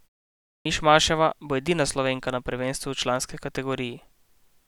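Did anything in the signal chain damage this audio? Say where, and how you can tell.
Yes, a clipped start after a pause, at the playback stage. After about 0.6 s of silence, the sound from 0.60 to 0.65 s is missing, so it begins abruptly. The output device slept through the pause and needed about 54 ms to wake and lock again.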